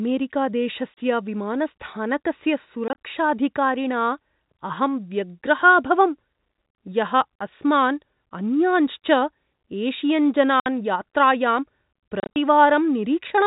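Packet loss filled with silence at 0.94 s, 2.88 to 2.97 s, 10.60 to 10.66 s and 12.20 to 12.36 s: lost packets were replaced by silence, punching holes in multiples of about 10 ms into the speech.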